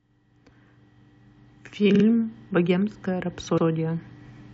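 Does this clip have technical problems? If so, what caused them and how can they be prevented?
Yes. The speech has repeated frames at two points. At 1.94 s, a block of about 46 ms plays twice more. This fits two compressed frames being sent again. At 3.57 s, a block of about 93 ms plays once more. Each spot adds about 93 ms and sounds like a brief stutter. The cause is a writer or transport resending data it already delivered. Tracking frame sequence numbers and discarding duplicates before decoding prevents this.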